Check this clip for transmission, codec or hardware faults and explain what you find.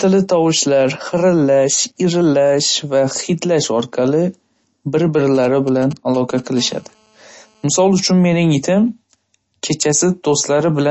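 Three faults are audible: codec damage across the whole speech clip and two bursts of mobile-phone interference in the middle.

From start to end, the speech carries plainly audible MP3 compression artefacts, likely from encoding at a low bitrate in the region of 32 kbps. Nothing is present above about 7.9 kHz, which is the encoder's fixed treble cut-off. Short of bits, the encoder drops weak spectral lines, and these switch on and off from frame to frame. The result is a watery, swirling texture, metallic chirps on s sounds, and smeared attacks.

From 5.35 to 6.40 s there are GSM signalling bursts, about 20 dB below the speech. A nearby 2G phone is exchanging short groups of radio bursts with the network, as it does before a call or a text arrives. The audio circuit rectifies these pulses and turns them into sound. It comes through as a galloping dit-dit-dit of short 217 Hz buzzes, unrelated to the speech underneath.

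From 6.57 to 7.66 s there is GSM phone buzz at about 28 dB below the speech. The phone is now in a call, sending radio bursts 217 times a second. The audio circuit rectifies these into a steady, hard, raspy buzz with a 217 Hz fundamental and a dense series of harmonics. The buzz runs independently of the speech and ends at 7.66 s.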